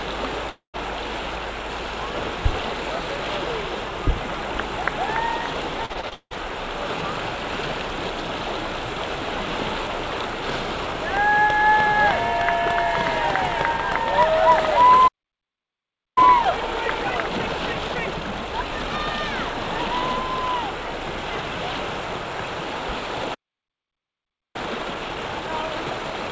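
From 0.50 to 0.76 s there is what is likely a long network dropout: the sound gives way to a fading buzzy continuation of the last moment, then about 0.12 s of silence before it resumes with a stretch missing. On a waveform this is a decaying smear followed by a flat line. On a spectrogram the harmonics blur, then go dark across the band, which ends at 8 kHz as expected for a G.722 call path.

Between 5.86 and 6.33 s, repeated packet loss (robotic sound) sets in. Five separate holes, the longest 173 ms, are patched by repeating what came just before, so more than half of this span is concealment. It sounds choppy with pieces missing, and the spectrogram shows repeated, frozen-looking vertical slices.

At 15.07 s the output stops dead for about 1.09 s, and again at 23.34 s for about 1.2 s. These are playback stalls, likely the player starving for data. They appear as abrupt flat gaps in the waveform and blank columns in the spectrogram, with the sound cut off mid-flow each time.

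Each stall is followed by time-compressed catch-up. From 16.18 to 19.18 s the audio runs at 1.25 times normal speed, and from 24.56 s to the end at 1.1 times. Small pieces are cut and cross-faded, so it sounds hurried while pitch stays put. Spectral lines keep their height but look squeezed in time, with tiny seams.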